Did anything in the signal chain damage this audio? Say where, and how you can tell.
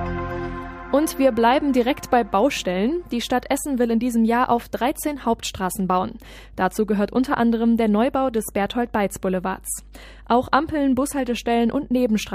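Yes: mains hum runs throughout, a steady 50 Hz tone roughly 25 dB below the signal, from a ground loop or nearby transformer in the analogue wiring.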